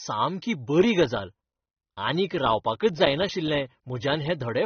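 From start to finish the speech is band-limited, with nothing above about 6.3 kHz, and carries plainly audible smearing and a warbling, fizzy texture on sibilants. This is likely AAC compression, with the dull top end and coarse quantisation pointing to AAC-LC at a low bitrate, near 28 kbps.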